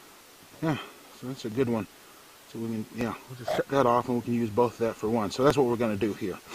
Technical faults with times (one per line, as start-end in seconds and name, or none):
0.52-6.00 periodic USB or driver dropouts